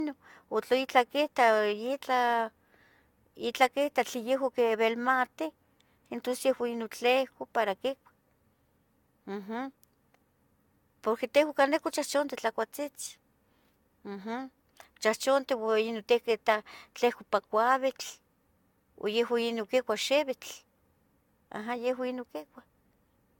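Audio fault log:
Throughout, generation loss: the speech sounds swirly, hollow and smeared with blurred attacks, likely from about four AAC passes at 96 kbit/s, with nothing above 17 kHz.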